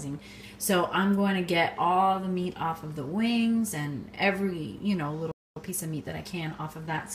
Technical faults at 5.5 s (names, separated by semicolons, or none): playback stall; time-compressed catch-up